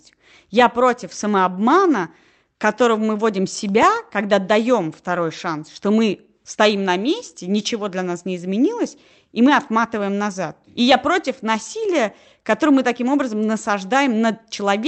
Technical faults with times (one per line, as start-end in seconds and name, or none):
3.69-3.96 CD scratch ticks